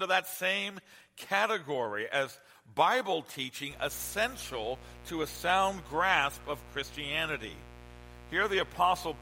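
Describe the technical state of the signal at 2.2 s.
At 2.2 s the signal is intact, with no audible fault at that moment.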